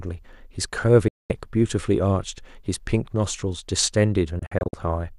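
A speech clip with two digital broadcast dropouts. At 1.08 s the sound fades out in about 3 ms and stays silent until 1.30 s. That is a gap of about 216 ms, which fits roughly nine lost 24 ms frames. From 4.39 s to 4.74 s the audio breaks into several short holes across about 336 ms. The longest is 48 ms, and about 168 ms goes missing in total. Each time, the receiver muted on bad or missing frames and came back when good frames returned. The missing audio is lost.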